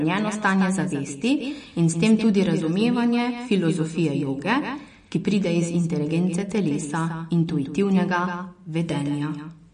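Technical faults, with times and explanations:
Throughout, doubled audio track: A second full-band copy of the speech trails the original by about 150 ms, roughly 10 dB quieter. It has no decay or room colour. Likely a second capture path or misaligned edit mixed both copies together.
Throughout, MP3 compression: Nothing is present above 10.1 kHz, so the speech sounds dull. Weak frequency components drop in and out between frames, giving a watery, swirly texture and smeared onsets. This plainly audible damage likely points to a low bitrate, around 40 kbps.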